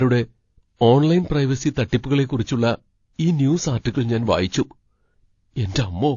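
Transcoding between lossy codecs, throughout the clip: the speech has nothing above 7 kHz, and swirly smearing sits alongside a second, different graininess. This points to a low-rate AAC-LC encode, likely near 24 kbit/s, re-encoded as WMA around 64 kbit/s, which kept the earlier cut-off and damage.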